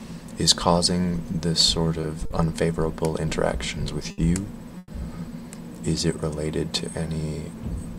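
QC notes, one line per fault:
2.01–2.05 s, 2.25–2.32 s, 4.11–4.20 s: short stall from a late packet. Each time a packet arrived late and the jitter buffer ran dry. The receiver held the last sound for 20, 50 and 70 ms, then resumed where it stopped. Nothing is lost, but each sound is drawn out with a faint buzz or dip.
4.78–4.91 s: call audio freeze. The likely cause is packets held up in transit, emptying the jitter buffer. The last sound is stretched into a fading buzz or hiss for about 110 ms, ending in a brief 10 ms silence. The audio then continues from the same point, so the gap adds delay without dropping any sound.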